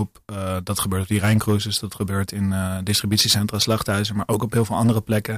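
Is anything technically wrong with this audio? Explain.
Yes, there's hard clipping all the way through: the speech is driven about 9 dB too hot, so a small share of peaks get sliced flat, giving crackly, fuzzy edges.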